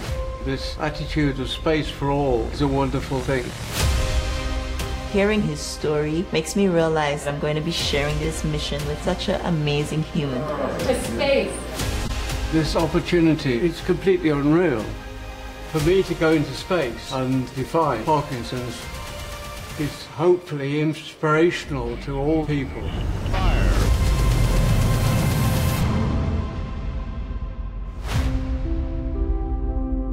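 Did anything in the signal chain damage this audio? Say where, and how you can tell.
Yes. Two short bursts, at 12.04 to 12.10 s and 17.62 to 17.70 s, peaking at about -15 and -25 dBFS, point to a corrupt frame decoded: bit errors in about six compressed frames were decoded anyway, misplacing energy across frequencies.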